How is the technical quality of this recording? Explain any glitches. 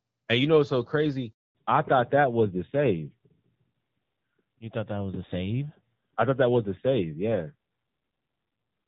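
The quality is mixed. The call starts in clear wideband sound with only light coding damage, which fits HD Voice at a mid-range rate. Then two linked faults break it.

A handover gap runs from 1.33 to 1.55 s, right after "know what's so crazy". The call was passed from one network to another. No speech frames arrived during the switch. The sound dies away quickly and stays silent for 220 ms. Anything said in that window is gone.

A fallback to narrowband follows at 1.55 s and lasts to the end. After the handover, the call lost HD Voice and dropped to an older narrowband codec. The sound points to AMR-NB at a low rate, around 7.4 kbit/s. Nothing above 4 kHz survives. The voice turns duller and muffled, with a rougher, grainier texture than before.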